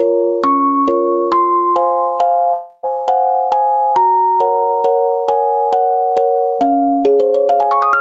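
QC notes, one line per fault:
Throughout, gain pumping: level swells in the gaps and ducks on loud moments, a swing of roughly 10 dB, likely from gain set too high feeding a fast limiter.
2.53 to 2.85 s, long network dropout: about 0.3 s of audio goes missing, filled by a fading continuation of the last sound, likely packets never arriving, then it resumes past the loss.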